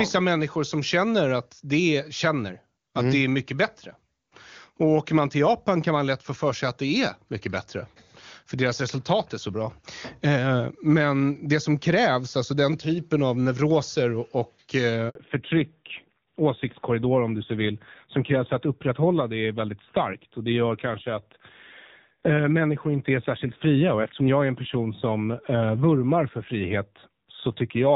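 A speech recording carried as an HD Voice call, clean and wideband in its first half, breaks at 15.09 s, just after "typen av neuroser och". There a handover gap of about 60 ms cuts the sound to true silence while the call switches networks. It differs from packet-loss concealment because nothing is smeared or repeated across the hole, and it differs from a dropout because the link resumes on a different codec. From 15.15 s to the end comes a fallback to narrowband. Nothing above 4 kHz survives, and the speech turns dull and rougher. That texture points to a low-rate AMR narrowband mode, around 7.4 kbit/s, replacing wideband AMR at 23.85 kbit/s. Unlike a simple low-pass filter, this change starts exactly at the handover and brings added coding roughness.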